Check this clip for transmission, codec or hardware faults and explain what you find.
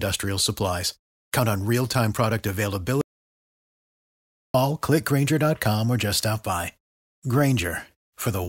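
One hardware-side fault is present: an audio dropout to silence from 3.01 s to 4.54 s. The input feeding the recorder was most likely lost for that stretch, whether through a disconnected device, a failed link or an accidental mute, while recording carried on writing silence. The speech stops abruptly mid-flow and restarts just as suddenly, leaving about 1.53 s of silence with no room tone. Whatever was spoken in that gap is unrecoverable.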